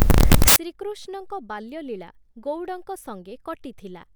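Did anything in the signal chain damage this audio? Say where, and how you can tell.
Yes: a sample-format conversion fault built samples from the wrong bytes for the first 0.56 s, so low bits dominate and the speech becomes loud, harsh broadband noise.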